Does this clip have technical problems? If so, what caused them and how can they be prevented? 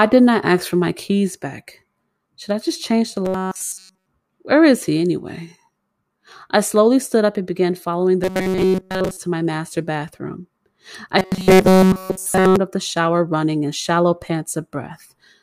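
Yes. At 3.25–4.06 s, 8.24–9.17 s and 11.19–12.57 s the speech becomes a rigid, metallic 188 Hz buzz. This is robotic sound from repeated short buffers, likely a 5.3 ms chunk replayed while new audio is skipped. Keeping the playback buffer fed, with a larger buffer or a lighter processing load, prevents it.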